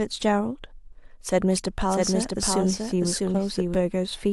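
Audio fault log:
1.79–3.75 s, doubled audio track: a dry full-band copy trails about 0.7 s behind, a few dB quieter, with abrupt edges; likely a slower capture path mixed in.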